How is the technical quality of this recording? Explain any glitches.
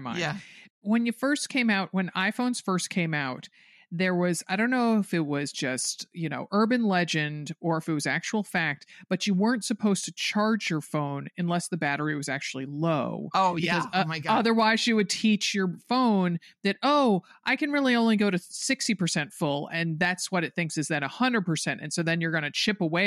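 No glitches or technical problems stood out on listening to this recording.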